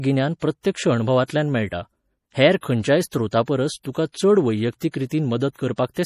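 Throughout the clip the speech carries damage that likely comes from MP3 compression at a low bitrate, with the sound pointing to roughly 40 kbps. Starved of bits, the encoder has thrown away the treble so nothing is left above 15 kHz, and it drops weak frequency lines that flicker in and out between frames. The result is plainly audible: a watery, swirling texture over the whole recording, with metallic chirping on sibilants.

At 4.91 to 4.94 s, just after "खंयच्याय स्रोतापरस तुका चड", there is pre-echo. A sharp onset landed late in a transform block, and the quantisation noise meant for that loud moment was spread across the whole block, including the quiet stretch before it. A hiss about 23 ms long runs ahead of the attack, and the onset itself sounds softened and smeared.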